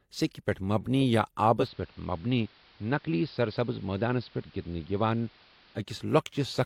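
Just after "پٮ۪ٹھ مبنی یا", at 1.56 s, digital radio blending to analogue begins. The receiver lost digital reception and cross-faded over 128 ms to the AM broadcast. Speech drops about 2 dB, and gains hiss roughly 30 dB down. Digital returns at 5.85 s.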